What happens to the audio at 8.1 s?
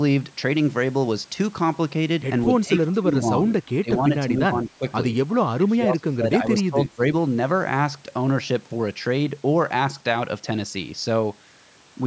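Nothing goes wrong at 8.1 s: the speech continues intact, with only the usual bass roll-off and 8 kHz top end of the call's microphone processing.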